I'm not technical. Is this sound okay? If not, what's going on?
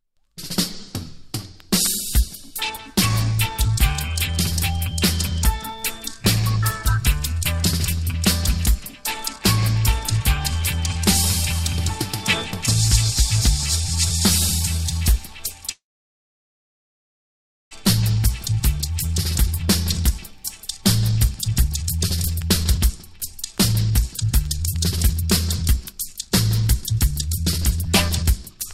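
No, there are two problems.

From 15.71 to 17.73 s the sound stops for about two seconds. There's a very brief trailing buzz, then near silence. This is a call audio freeze. The likely cause is that the data carrying the sound got held up on its way, so the receiver ran out of sound to play. When the data arrived, the sound carried on exactly where it stopped. Nothing is lost. A gap was just inserted.

Right after, the receiver tries to catch up. This is a jitter buffer speed-up. From 18.03 to 20.31 s the sound plays about 10 percent fast, and roughly a fifth of a second is trimmed away. From 20.82 to 28.60 s it runs about 20 percent fast, and around one and a half seconds are removed. Tiny slices are cut out over and over. So the pitch stays the same, but everything sounds rushed.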